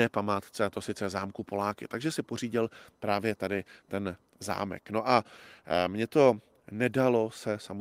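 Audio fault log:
No fault can be heard in this speech clip.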